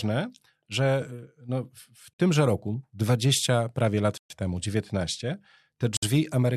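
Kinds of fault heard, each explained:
Bluetooth stall: The speech drops to dead silence three times and then carries on, with gaps at 2.13 to 2.19 s (about 53 ms), 4.18 to 4.30 s (about 127 ms, the longest), and 5.97 to 6.03 s (about 58 ms). The likely cause is radio interference holding up packets on a wireless link, so the receiver's buffer ran empty and playback sat waiting until the resent data turned up.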